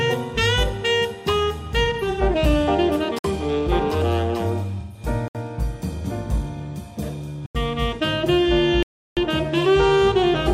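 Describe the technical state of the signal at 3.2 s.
A block of digital silence runs from 3.19 to 3.24 s: about 57 ms of samples drop to near silence, leaving a short hole with abrupt edges. The waveform shows a flat line near zero, and the spectrogram shows a blank vertical band bracketed by thin broadband streaks.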